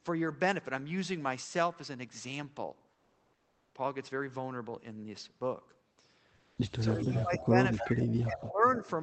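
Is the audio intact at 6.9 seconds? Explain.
No, 6.9 s falls inside a stretch of speech suppressed in double talk, from 6.79 to 8.02 s. The speech dips by roughly 15 dB, likely because the echo canceller could not separate this side's talk from the loudspeaker echo and turned everything down.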